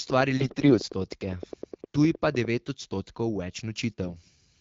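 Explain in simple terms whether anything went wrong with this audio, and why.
A couple of things went wrong here. From 0.10 to 2.46 s there's a train of clicks: about twenty sharp ticks, each much like the last, coming at a steady pace of roughly ten per second. They sit on top of the speech and keep going through the gaps too, so they're easy to pick out. Something outside the sound itself is likely firing off these little pulses, like interference from nearby gear or a faulty connection or power supply.

The second problem is AMR bit errors, which show up in two bursts, from 0.37 to 0.80 s and again from 4.04 to 4.30 s. The phone-style codec squeezes speech into small packets. On a shaky connection, some of the less important bits inside those packets got flipped, but the packets still passed the check meant to catch damage. The decoder then rebuilt the voice from slightly wrong instructions, so in those stretches it keeps roughly the right pitch and loudness but turns hoarse, scratchy and a bit gargly. 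Around those bursts the HD Voice codec leaves only light traces of its own.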